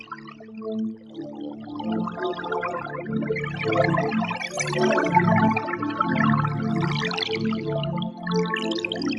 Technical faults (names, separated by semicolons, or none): noise suppressor applied to music or sounds; sound cut by the noise suppressor